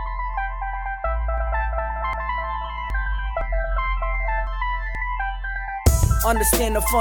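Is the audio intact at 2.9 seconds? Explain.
No. At 2.90 s the music jumps ahead, skipping roughly a third of a second, likely a dropped buffer (overrun) where the hardware overwrote unread samples. This happens inside a doubled audio track running from 1.38 to 4.47 s: a clean copy about 5 dB quieter trails around 0.7 s behind, likely from a second, slower capture path.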